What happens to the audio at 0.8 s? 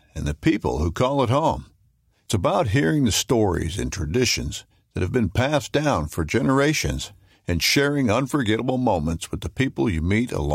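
Nothing goes wrong at 0.8 s; the speech there plays through intact, with no dropout, glitch or other fault.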